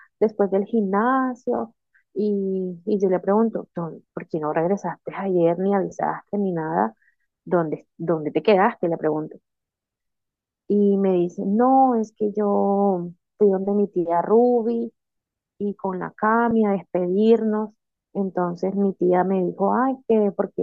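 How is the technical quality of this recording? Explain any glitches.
Two brief glitches break up the speech, at 5.90 s and 16.51 s. Each is a short, grainy smear, about 15 ms long the first time and 7.5 ms the second. These are lost LE Audio frames: the LC3 decoder covered each gap by repeating the last spectrum with randomised signs. That fits two missing 7.5 ms frames at 5.90 s and one at 16.51 s. The faint breathy edge on the speech is likely from the Bluetooth LC3 compression itself.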